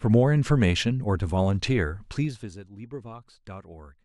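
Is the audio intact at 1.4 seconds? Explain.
Yes, the speech at 1.4 s is intact, with no fault at that moment.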